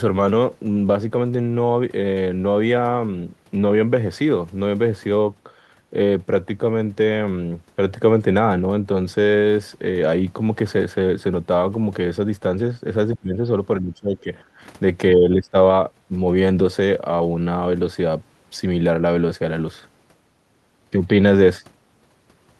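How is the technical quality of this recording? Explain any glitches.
The recording has three short dropouts in the speech. From 13.16 to 13.4 s, 13.8 to 14.28 s and 15.14 to 15.55 s, the voice sinks by about 25, 20 and 10 dB. The likely cause is speech suppressed in double talk: an echo canceller mistook overlapping talk for echo and turned it down. The call path, with its top end stopping near 12 kHz as an Opus call link would, can be heard throughout.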